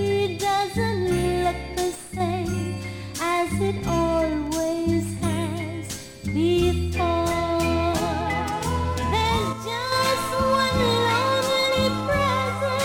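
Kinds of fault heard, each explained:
One channel drops out: a stereo channel was likely lost briefly, so the summed sound falls abruptly by about 6 dB from 1.95 to 2.20 s and from 9.53 to 9.92 s.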